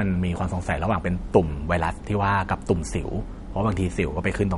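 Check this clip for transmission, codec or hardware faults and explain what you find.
The clip has one fault, present throughout: plainly audible MP3 compression. Nothing remains above 11.2 kHz, and the speech sounds watery and swirly, with metallic chirps on s sounds and smeared attacks. That fits a likely starved encoder at roughly 49 kbps that zeroes weak frequency lines frame by frame. A plain low-pass filter would dull the treble without this flickering swirl.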